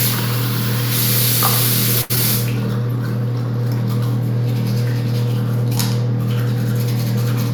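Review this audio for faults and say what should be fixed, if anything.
A short stall from a late packet runs from 2.01 to 2.12 s. A packet arrived after its playout time, the jitter buffer emptied, and the receiver held the last sound for 82 ms until the packet came. Playback then resumed from the same point, so nothing is lost, but the sound hangs with a faint buzz or dip and everything after it lands 82 ms later. Unlike packet loss, no audio disappears. A jitter buffer that adapts its depth earlier to rising network jitter would absorb a late arrival like this.

A short concealed packet loss follows at 2.16 to 2.18 s. About 40 ms of audio never reached the decoder in time. The receiver bridged the gap with just 6 ms of extrapolated sound before blending back into the real signal, which gives a brief smear or wobble. Playback delay also drops back by roughly 30 ms. Unlike the stall just before it, audio is actually missing here, so a short onset can vanish rather than being held. 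Forward error correction or packet redundancy would let the receiver rebuild lost packets instead of guessing at them.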